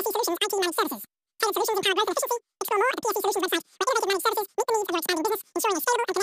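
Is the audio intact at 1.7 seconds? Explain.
No. At 1.7 seconds, as throughout the clip, the speech suffers from a wrong sample rate. The samples are being clocked out far faster than they were captured, with no rate conversion, so duration and pitch shift together. Everything runs about 2.76 times too fast and sits roughly 17.6 semitones high, giving a squeaky, chipmunk-like, hurried sound. That ratio fits 16 kHz material played back at 44.1 kHz.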